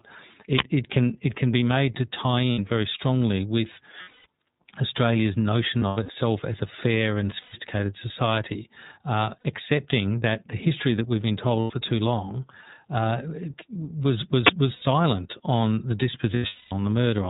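Throughout, the speech is band-limited with nothing above 4 kHz and has a slightly rough, synthetic edge. That is the iLBC codec, whose plainly audible damage fits its 13.33 kbps mode, coding each 30 ms frame independently.

At 0.59 s and again at 14.47 s, a loud burst of digital noise lasts about 23 ms. It is an uninitialised buffer: leftover memory was played as sound, which fits a 1024-sample block output before any audio was written.

Short held, buzzy vowel-like stretches replace the speech at 2.52–2.59 s (60 ms, after "be made to tie" and before "very strongly with"), 4.02–4.26 s, 5.79–6.15 s (before "as a fair and"), 7.41–7.55 s, 9.41–9.46 s, 11.60–11.71 s (before "too long uh"), 14.72–14.83 s and 16.34–16.72 s. These are lost iLBC frames. The decoder repeats the last pitch cycle mixed with noise, then recovers almost immediately. The longest continuous gaps run roughly 150 ms and 200 ms, within the scattered losses at 4.02 s and 16.34 s.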